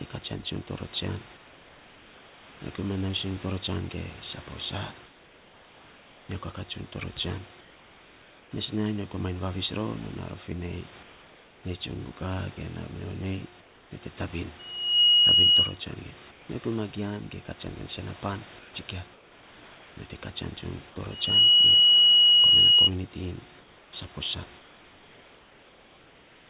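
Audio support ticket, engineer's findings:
Pauses go flat: the real room background drops out and a steady, featureless hiss takes its place, about 2 to 3 dB quieter. Occurs at 1.37–2.6 s, 5.06–6.29 s, 7.61–8.51 s, 11.03–11.63 s, 13.61–13.91 s, 16.31–16.49 s, 18.59–19.97 s, and 23.6 s to the end. Comfort noise in place of the background, likely from discontinuous transmission. Sender goes quiet when no speech is detected, and the receiver synthesises shaped noise until speech resumes. Narrowband path, nothing above 4 kHz.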